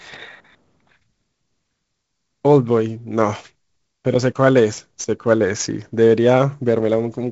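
Speech, with sample clock jitter running right through it: a gritty hiss that swells on loud, bright syllables and drops away in pauses, from timing wobble of several microseconds, roughly 30 dB down. The band stops near 7.7 kHz, which fits G.722 wideband coding.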